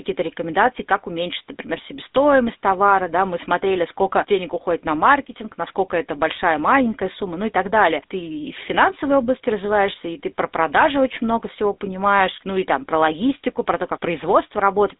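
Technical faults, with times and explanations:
Throughout, GSM full-rate codec: the speech carries the plainly audible buzzy, gravelly roughness of the original GSM coder, which fits a 13 kbps full-rate stream. The coder rebuilds the voice from a vocal-tract filter driven by a sparse, evenly spaced pulse train that keeps only every third excitation sample, so fine texture turns to grit. The band runs from 250 Hz to 3.7 kHz, with nothing above 3.8 kHz, leaving a thin, telephone-like sound.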